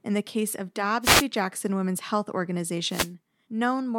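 At 1.02 to 1.25 s and again at 2.88 to 3.11 s, a wireless microphone noise hit: the FM radio link fades as reflected paths cancel, so receiver noise swells into a brief static swish over the speech. Unlike a digital dropout, the gap fills with hiss rather than silence.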